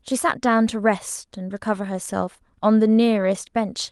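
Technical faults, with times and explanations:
No technical faults detected.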